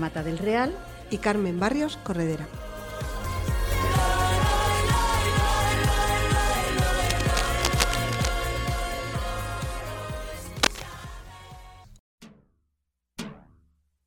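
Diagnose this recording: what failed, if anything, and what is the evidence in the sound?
Cable scratch noise, likely from a worn cable or connector: dense, ragged scratching from 6.98 to 8.28 s (about 5 dB under the signal) and again from 10.55 to 10.83 s, roughly level with it.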